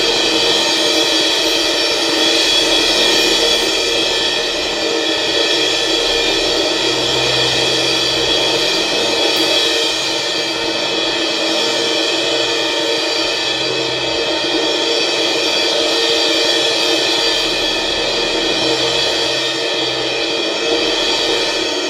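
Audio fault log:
No faults heard anywhere in this music.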